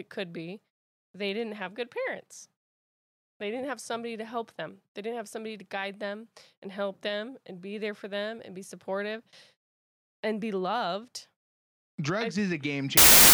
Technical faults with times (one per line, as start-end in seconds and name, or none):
12.97-13.34 samples built from the wrong bytes